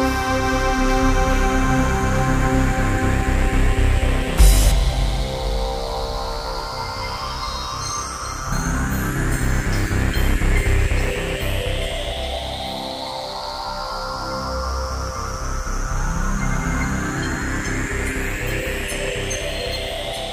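At 8.52 s there is a brief burst of damaged data in the compressed stream. Corrupted bytes leave the decoder unable to read the frame. It loses sync and hunts for the next valid frame header. The result is a short glitch, a chirp, squawk, click or brief hole.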